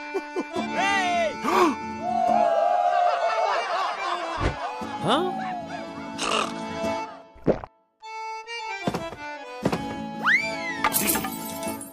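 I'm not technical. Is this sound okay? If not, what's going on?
No, there are four small, sharp clicks, at 3.81, 5.37, 9.25 and 10.98 seconds. Each one is likely a case of dropped samples: a tiny sliver of the recording, just a handful of the individual points that make up the sound wave, went missing. Nothing audible is actually lost, but the sound wave suddenly jumps to a later point instead of flowing smoothly, and that jump comes across as a quick tick.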